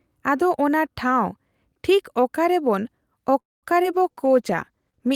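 A short speech clip where the trouble all lands in the last couple of seconds. From 3.39 to 3.65 s there's a call audio freeze: the sound stretches into a fading fill and then about 0.21 s of silence before picking up where it left off. That points to packets likely stalling in transit and the jitter buffer running dry, so nothing's lost, it just slips later by about 0.23 s. Right after, at 3.83 to 3.86 s, a short concealed packet loss shows up as a quick smear where roughly 20 ms never arrived and the decoder bridged it by extending the preceding sound. Then from 3.95 s to the end there's a call bitrate drop, from 64 kbps down to 15 kbps, holding at the bottom for about 1.07 s, and the speech goes coarse and dulled as the encoder squeezes it and trims the top end.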